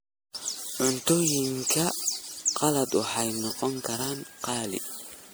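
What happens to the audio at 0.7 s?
The speech at 0.7 s carries generation loss, which runs through the whole clip rather than starting there. It sounds swirly, smeared and hollow, with consonant attacks blurred, and the cause is likely repeated MP3 decoding and re-encoding, around five passes at a rate that suggests about 96 kbit/s. Each pass requantises on a shifted frame grid, so noise and spectral holes pile up. A single encode at that rate would sound cleaner.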